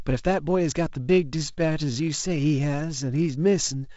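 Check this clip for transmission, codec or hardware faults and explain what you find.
One fault stands out, a time-stretched section. From 1.0 s to the end, the speech suddenly drags to about 0.74 times its pace while the pitch stays put. That's likely software padding the audio by repeating short slices to fill a longer slot. The wideband telephone coding underneath, which fits G.722 at 48 kbit/s, keeps speech clear up to around 7 kHz with a light hiss.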